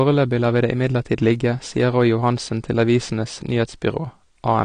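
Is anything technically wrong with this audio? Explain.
Yes. Throughout, the speech sounds dull and smeared, nothing above about 9.7 kHz, with a warbling, fizzy texture on sibilants. This is likely AAC compression: the encoder discards high frequencies and coarsely quantises the remaining bands, consistent with AAC-LC at around 32 kbps.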